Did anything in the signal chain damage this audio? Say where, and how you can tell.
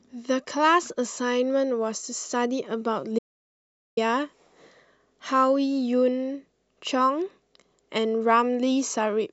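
Yes. This is an audio dropout to silence in the speech, running from 3.19 s to 3.97 s. The sound stops abruptly mid-flow and resumes just as abruptly. The gap is silent, with no room tone or noise floor underneath. About 0.78 s of speech is simply missing. The likely cause is a lost input at the capture stage, such as a loose cable or a brief mute, while the recorder kept writing silence.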